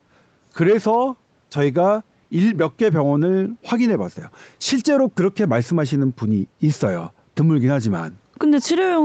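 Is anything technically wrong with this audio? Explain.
No, nothing is technically wrong with this audio.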